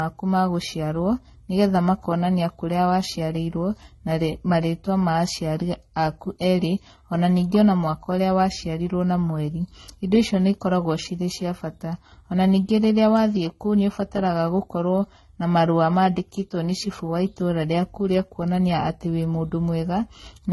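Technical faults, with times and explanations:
Throughout, transcoding between lossy codecs: nothing above 11.8 kHz, and two layers of coding damage are heard at once, the MP3's own artefacts on top of the earlier codec's. That likely comes from a low-bitrate HE-AAC encode re-encoded to low-bitrate MP3.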